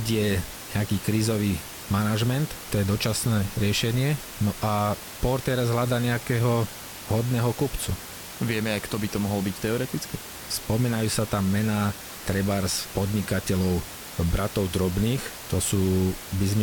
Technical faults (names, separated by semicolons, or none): none